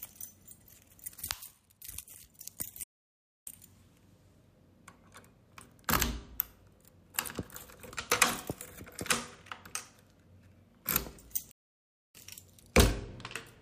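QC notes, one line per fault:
2.83–3.47 s and 11.51–12.15 s, playback stall: the sound cuts out mid-flow for about 0.64 s each time, then carries on. The likely cause is the player running short of data or its output thread being held up, so nothing reaches the output until it recovers. On a waveform each gap is a flat, near-silent line with abrupt edges. A spectrogram shows a clean vertical band of empty bins across all frequencies at both points.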